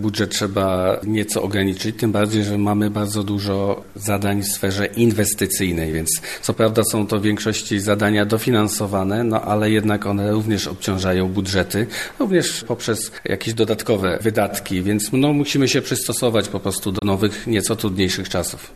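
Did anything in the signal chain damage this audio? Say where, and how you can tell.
Yes. A digital broadcast dropout damaged the audio at the reception and decoding stage, from 16.99 to 17.03 s. The sound fades out over about 8 ms, leaves a hole of roughly 24 ms, and then resumes. That gap fits a single corrupted frame that the receiver muted instead of decoding. A loose analogue connection would click or crackle instead of fading cleanly. Packet-loss concealment in a call would fill the gap with smeared or repeated sound, while this one is true silence.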